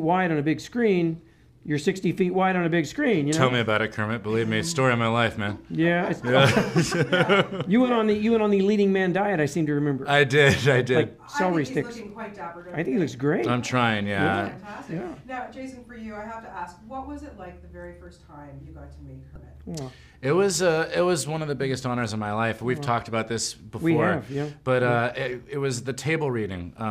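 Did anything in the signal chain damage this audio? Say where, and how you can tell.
Yes. At the codec stage, damaged data in a compressed stream causes a short glitch from 19.33 to 19.37 s. It lasts about 34 ms. Corrupted bytes there made the decoder misread its frames and lose sync. It then recovered at the next valid frame header.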